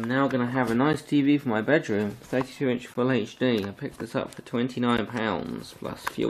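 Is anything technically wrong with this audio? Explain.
Yes. There are gaps between stream segments at 0.93, 2.94 and 4.97 s. At each two-second segment boundary, the time stamps leave a small hole that the player fills with silence. You hear hard-edged dropouts of about 10 to 14 ms at regular two-second intervals, with nothing actually missing from the audio.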